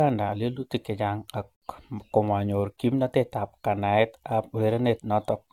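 Throughout the speech there is a swirling, hollow quality, and consonant onsets sound smeared. This is generation loss, likely from about seven rounds of lossy re-encoding in a codec whose character fits AAC-LC at 96 kbit/s. A single low-bitrate encode would sound different: at that rate one pass should be fairly clean. Here each pass quantised on a shifted frame grid, so noise and spectral holes have stacked up.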